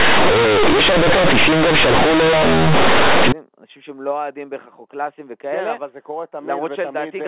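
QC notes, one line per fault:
0.00–3.32 s, companded audio read as linear: the mu-law telephone bytes are played as plain 8-bit samples without expansion, so each sign change swings across half the output range and quiet sounds match loud ones, giving loud, buzzy distortion and strong noise in pauses.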